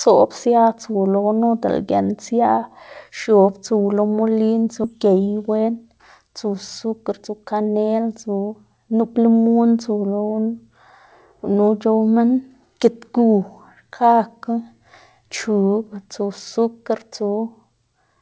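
At 4.84–4.86 s, right after "x̱ob tsuw lo molin", a skip ahead drops roughly 0.4 s of speech, and the two sides are spliced with no gap. Unlike a dropout, there is no silence or concealment fill, only an abrupt jump forward in the sentence, as a late or overflowing buffer discards audio already queued.

From 4.96 to 5.56 s, a jitter buffer speed-up runs the speech at 112% as the receiver trims repeated pitch-period slices, around 70 ms in total, to shed the excess delay. A second, gentler pass from 6.84 to 7.69 s runs at 106% and removes around 50 ms. Both stretches sound hurried while pitch stays unchanged, which sets them apart from a resampling error, where faster playback would also raise the pitch.

Throughout, the G.722 call path limits the audio to nothing above 8 kHz.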